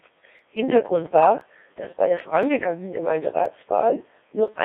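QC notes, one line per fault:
Throughout: Codec 2 vocoder. The speech is rebuilt from pitch, voicing, energy and a coarse spectral envelope rather than the original waveform. It sounds robotic and buzzy, with heavy damage and a band of 300 Hz to 3.6 kHz. The thin, synthetic texture fits a 1.6 kbit/s mode.
0.39 to 4.48 s: periodic USB or driver dropouts. About five short gaps fall evenly every 1.02 s. Each time, roughly 2 ms of audio is skipped rather than filled. The splice causes a regular tick that is heard only while signal is present.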